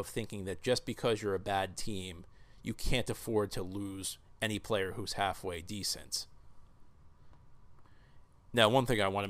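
No technical faults can be heard anywhere in the speech recording, and the signal stays continuous and intact throughout.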